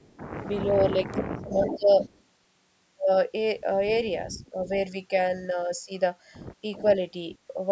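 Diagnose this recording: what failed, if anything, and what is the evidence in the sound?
A delayed copy of the speech trails the talker at 0.00–0.17 s, 1.11–2.2 s, 3.9–4.68 s, 6.74–6.92 s and 7.3–7.38 s, arriving about 0.39 s late (398 ms in the first burst, 385 ms after). It is loudest at 1.11–2.2 s, only about 10 dB under the speech, and elsewhere sits about 20 to 35 dB down. This is echo leak in call processing, likely a loudspeaker-side echo canceller letting part of its microphone pickup return down the line.

Between 0.63 and 1.9 s the talker's level dips in pieces, by up to roughly 20 dB and for around 0.7 s in total. This overlaps the strongest echo burst. A shorter dip of about 15 dB falls at 4.35–4.56 s, again during an echo. This is speech suppressed in double talk, likely the echo canceller's suppressor being unable to separate the local talker from the returning loudspeaker signal while both are active, so it attenuated everything. 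The absence of content above 8 kHz reflects the call's bandwidth and is not part of this fault.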